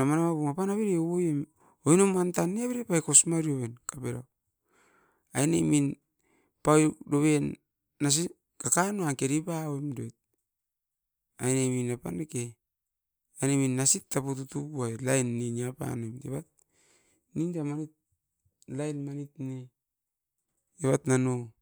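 No technical faults occur at any point in the speech, so there is nothing to place in time order.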